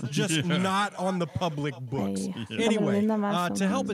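Echo with no canceller runs throughout: the far end's speaker bleeds into its mic, so each phrase returns about 20 dB down, roughly a third of a second late, and thin.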